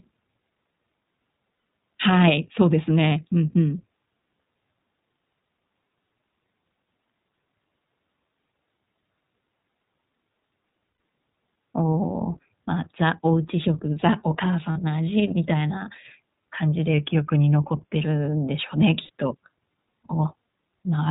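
The whole speech recording has passed through the iLBC codec, a narrowband VoIP coder that handles each short frame on its own. Its sound fits the 15.2 kbps mode with 20 ms frames. Nothing above 4 kHz survives, so the speech is dulled and boxy, and the coding damage is plainly audible as a rough, slightly synthetic edge on every syllable.

Packets went missing in transmission, producing lost iLBC frames at 1.56 to 1.64 s and 10.92 to 11.00 s (80 ms each), at 4.94 to 4.98 s and 14.72 to 14.78 s (40 ms each), and at 19.03 to 19.09 s (60 ms). Each time, the decoder fills the hole by repeating the last pitch cycle blended with noise. The gap comes out as a brief held, buzzy vowel, and clean speech resumes immediately afterwards because the next frame decodes independently.

From 16.94 to 17.95 s the playback rate drops by about 5.3%, then snaps back. The likely cause is a drift correction step, where clock-matching software altered the rate in one jump to rebalance its buffer. 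Speed and pitch fall together by about 94 cents, just short of a semitone, so the speech sounds abruptly detuned and sluggish for about a second before it returns to its proper pitch.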